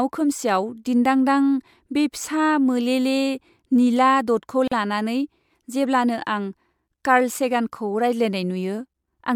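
A speech recording with a brief dropout near the middle: from 4.68 to 4.72 s a gap of about 40 ms opens, its edges smeared so the silent part is shorter, then the sound resumes exactly where it left off. This is a gap at a join of encoded pieces. The audio was encoded in separate sections and spliced without trimming, so the encoder's start-up delay and the padding of the last frame were both left in at the seam.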